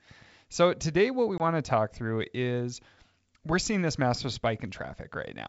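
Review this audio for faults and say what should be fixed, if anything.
Packet loss on the ADPCM call at 1.38 to 1.44 s, after "today what we": a roughly one-packet, 20 ms gap drops to silence. The decoder's predictor and step size lose sync, so "to talk through is" resumes disturbed until they reconverge. Adding packet loss concealment that resets or resynchronises the ADPCM decoder state, with adequate jitter buffering, would prevent this.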